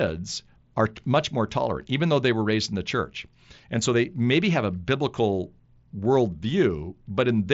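No faults: the speech carries the 8 kHz bandwidth of the wideband Bluetooth headset codec, mSBC, with the faint grain that codec adds on louder passages.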